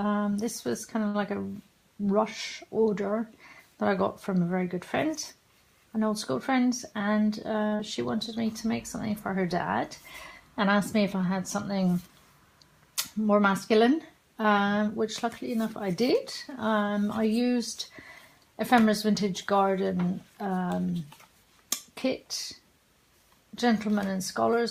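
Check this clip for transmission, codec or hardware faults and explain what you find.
Transmission faults from a jittery network connection can be heard: two short stalls, two jitter buffer speed-ups, and one short concealed packet loss.

Short stalls from a late packet occur at 1.07 to 1.17 s and 7.67 to 7.75 s. Each time, a packet arrived late and the jitter buffer ran dry. The receiver held the last sound, for 68 ms and then 47 ms, and resumed where it left off. Nothing is lost. The sound just lingers too long, with a faint buzz or dip. Each stall adds its length to the delay.

Jitter buffer speed-ups run from 6.51 to 7.30 s and from 14.81 to 15.58 s. Audio had piled up in the buffer. To cut the delay, the receiver trimmed tiny pitch-period slices again and again. The first passage plays at 108% speed and drops roughly 70 ms. The second plays at 105% and drops about 40 ms. Pitch stays the same, but the sound feels hurried.

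A short concealed packet loss follows immediately at 7.76 to 7.82 s. About 40 ms of audio never reached the decoder. The receiver extended the preceding sound for 33 ms, then blended back into real audio. This produces a brief smear or wobble right after the second stall, and a short sound may vanish.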